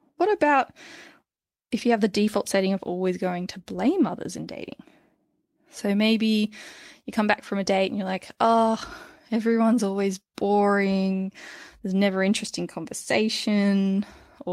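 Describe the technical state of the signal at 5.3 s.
At 5.3 s the speech signal is intact, with no audible fault at that moment.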